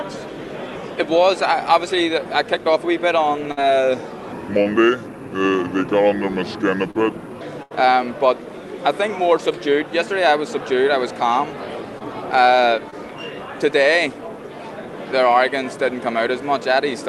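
At 3.51 to 3.59 s there is a burst of packet loss. Roughly 60 ms of audio never arrived in time, and the receiver covered about 55 ms of it by extending the last sound while fading it down. You hear a short held buzz or dying hiss, then a jump forward where the missing stretch simply isn't there. The same thing recurs at 7.63 to 7.72 s, longer this time: about 80 ms lost, with around 79 ms filled before playback resumes past the gap.

From 4.32 to 7.41 s a section plays at the wrong speed, running at 0.724 times its proper rate. Because speed and pitch move together, everything in that span drops by about five semitones and drags, turning deep and slow, then snaps back at the end. The likely cause is playback or editing against a mismatched clock.

Short concealed packet loss shows up at 4.63 s, 6.91 to 6.97 s, 11.98 to 12.02 s and 12.90 to 12.94 s. Each hole is about 20 ms, except the second at about 40 ms, and the decoder patched it by continuing the preceding pitch or noise and blending back in. 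The result is a brief smear or wobble, and a short transient at those points can go missing. All of this rides on an Opus call path whose coding noise fits roughly 32 kbps, with high frequencies cut off at 12 kHz.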